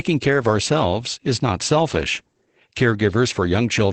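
Opus voice compression runs through the whole speech clip. Its low-rate SILK coding, which fits roughly 12 kbps in wideband mode, cuts everything above about 8.6 kHz and coarsely codes the excitation, leaving the speech plainly muffled, hoarse and slightly robotic.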